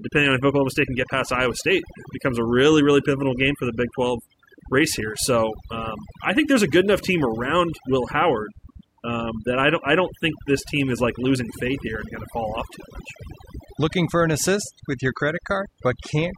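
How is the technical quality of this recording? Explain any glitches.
The recording is compromised by one processing fault that runs through the whole clip.

Overdone noise removal is present from start to end. An aggressive denoiser muted individual frequency bands it judged to be noise, dragging quieter parts of the speech down too. Between phrases the background drops to near silence speckled with twinkling artefacts. That flickering, band-by-band gating sets it apart from a plain low-pass or steady hiss.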